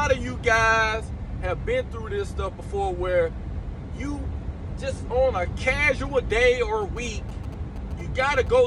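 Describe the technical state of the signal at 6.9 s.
At 6.9 s, GSM signalling bursts are under way, running from 6.82 s to 8.48 s. A nearby 2G phone is exchanging short control transmissions with its network, and the audio circuitry rectifies that pulsed radio energy into the signal path. The result is a galloping dit-dit-dit of brief buzzes at a 217 Hz repetition rate, sitting roughly 20 dB below the main sound.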